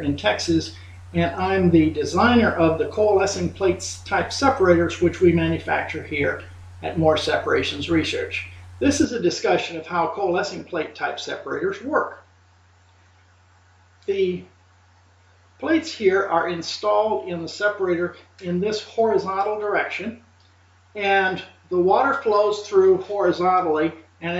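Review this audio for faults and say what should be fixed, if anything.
Input switched to a poorer device at 9.05 s, through to the end: the sound turns duller with nothing above 7.6 kHz, gets slightly quieter and gains faint new background noise, with no gap. The input likely jumped to a narrower-band microphone or headset profile. Locking the input device for the whole session and turning off automatic device switching would prevent it.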